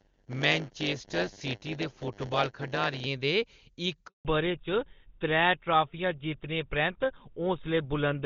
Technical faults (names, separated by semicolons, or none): block size mismatch (padded); handover gap; fallback to narrowband